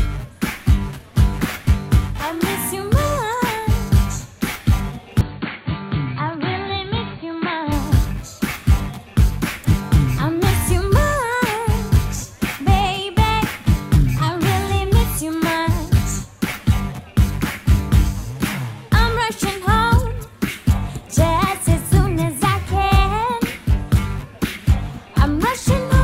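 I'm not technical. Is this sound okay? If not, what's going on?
No. From 5.21 to 7.72 seconds the sound turns dull and a little quieter, with faint new background noise, then clears again. That points to an input switched to a poorer device, likely a different microphone. Nothing above 4.5 kHz gets through.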